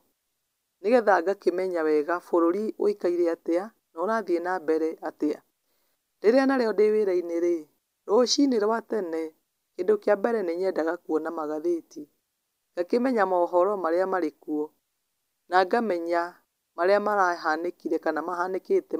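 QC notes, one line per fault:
No faults stood out on listening.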